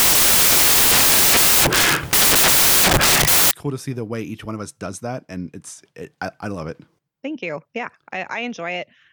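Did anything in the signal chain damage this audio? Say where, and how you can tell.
Yes. From 0 to 3.51 s the speech comes out as loud white noise: samples built from the wrong bytes during sample-format conversion, so the fast-changing low bits dominate each value.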